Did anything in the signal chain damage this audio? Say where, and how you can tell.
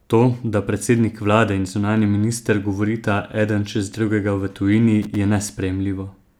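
Yes, loose connector crackle in the analogue wiring from 5.02 to 5.16 s, after "čez drugega v tujini". A flickering contact chops the speech into an irregular scratchy burst.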